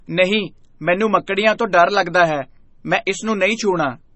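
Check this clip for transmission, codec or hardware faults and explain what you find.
One codec fault runs through the whole speech clip. Likely MP3 compression, heavy enough to suggest about 24 kbps, starves weak frequency lines and cuts everything above 8 kHz, leaving dull, watery, swirling speech with smeared attacks.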